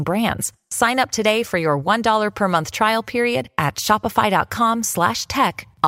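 A speech clip with a bit error spike at 1.31 s: one sample jumps to about -13 dBFS and snaps straight back, giving a sharp tick. A single flipped bit explains it. The waveform shows a lone one-sample needle, and the spectrogram a thin full-height vertical line unrelated to the speech.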